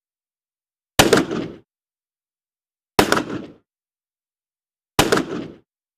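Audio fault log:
No technical faults can be heard anywhere in the sound; the signal stays continuous and stable, with no interruptions or disturbances.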